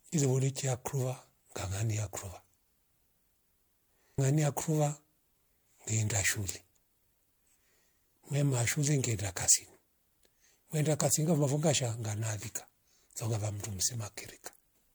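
Generation loss runs throughout the speech, with swirly, hollow smearing and blurred attacks, likely from roughly four successive MP3 passes at what sounds like about 96 kbit/s.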